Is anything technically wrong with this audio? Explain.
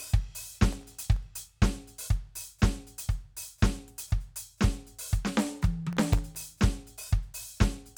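Yes. Processor overload crackle occurs twice in this music, at 0.53 to 1.22 s and 5.93 to 6.50 s. Tiny buffers of under a millisecond repeatedly missed their deadlines and replayed old audio, producing a gritty, tearing crackle that stops once the load eases.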